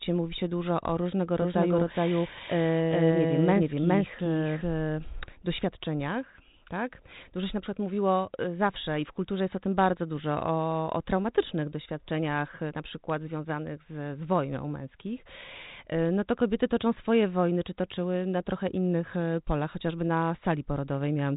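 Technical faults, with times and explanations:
1.42–5.32 s, doubled audio track: just after "się dużo o różnego", a second full-band copy of the speech runs roughly 0.4 s behind the first, at about the same level, until it stops abruptly before "doświadczeniach tak". The lagging copy carries no decay or room colour, so it sounds like a hard repeat rather than an echo. It is likely a second capture through a slower path being mixed back in, with the telephone-band coding cutting everything above 3.8 kHz from both copies alike.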